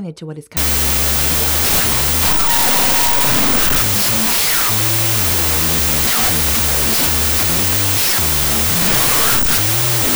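At 0.57 s, right after "to what is", a wrong sample width fault begins and runs to the end. The audio was stored as 32-bit float but read as 16-bit integers. Each float gets split into two integer samples. Many resulting values mix unrelated bytes, so loud, harsh noise dominates. Only fragments that carry the float's upper bytes still follow the real waveform. The speech is buried in that noise and plays at half speed with lowered pitch.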